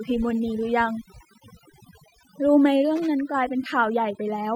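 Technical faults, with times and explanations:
Throughout, overdone noise removal: the background drops and breaks up into twinkling specks. A noise reduction stage set far too hard pulls single frequency bands down or off near its noise estimate, taking quieter speech detail with them.
2.96 to 3.07 s, loose connector crackle: a short, irregular burst of scratchy crackle lasting about a tenth of a second. A worn or dirty contact is rapidly making and breaking the connection, chopping the signal on and off in quick, uneven bursts.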